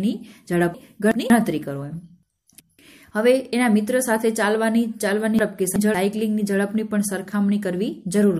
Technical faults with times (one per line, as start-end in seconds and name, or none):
0.74-1.30 chunks out of order
2.23-2.79 chunks out of order
5.39-5.94 chunks out of order